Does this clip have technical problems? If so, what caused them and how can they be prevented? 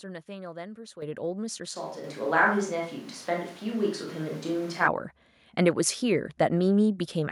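Yes. The microphone volume stepped up at 1.02 s by about 9 dB and again at 2.04 s by about 4 dB, as the software raised input gain. Voice and background jump together with unchanged tone, which separates this from a microphone change. Disabling automatic microphone level adjustment prevents it.

From 1.77 to 4.86 s the sound abruptly turns roomy and hollow, with thinner bass and room noise roughly 25 dB below the speech, though loudness barely shifts. This is likely a switch to a distant microphone; unlike a gain step, the tone changes. Locking the input device selection prevents it.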